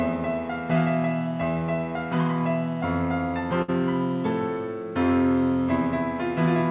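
At 3.62 s the music hits a burst of packet loss. For 60 ms, until 3.70 s, the receiver stretches the last sound into a fading hold, then resumes with 60 ms of audio skipped. A waveform shows a decaying, repetitive patch. A spectrogram shows frozen, smeared harmonics, then an abrupt jump. Throughout the clip nothing reaches above 4 kHz, which fits a narrowband call codec such as G.711.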